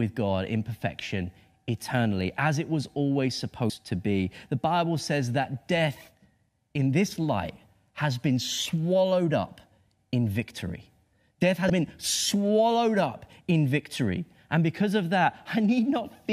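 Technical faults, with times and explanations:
3.70 s and 11.66 to 11.70 s, damaged data in a compressed stream: a short glitch breaks in after "as it was always", then again just before "been swallowed up in". Corrupted bytes made the decoder misread those frames and lose sync until the next frame header.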